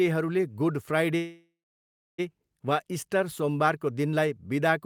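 At 1.17 s the speech stops and the last sound carries on as a buzzy, fading tail, then drops to silence for about 0.67 s before the speech resumes at 2.20 s exactly where it broke off. This is a call audio freeze: packets were likely held up in transit, leaving the receiver's jitter buffer empty. It filled roughly 1.01 s with stretched sound and silence, losing nothing but pushing everything after it about 1 s later.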